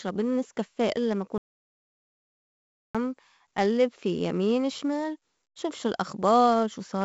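From start to finish the speech has passed through 4-bit ADPCM compression: each sample is coded as a coarse step from a prediction, and the noise that results rides on the signal, giving a gritty hiss on louder syllables and roughness on attacks. Nothing remains above 7.7 kHz, which fits a low-rate encoding of about 64 kbps.

At 1.38 s, right after "إلّا ما", an audio dropout to silence begins, likely from the input being lost while the recorder kept writing silence. For 1.57 s, until 2.95 s, there is dead digital silence with no room tone, and the speech in that stretch is gone.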